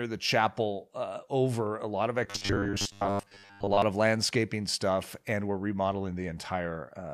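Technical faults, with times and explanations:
2.24–3.82 s, robotic sound from repeated short buffers: after "over a lot of", speech becomes a metallic buzz at 100 Hz until "of landscaping stuff and". Likely caused by audio arriving too seldom, with gaps filled by a repeated 10 ms snippet; unlike distortion, the buzz follows the speech only roughly.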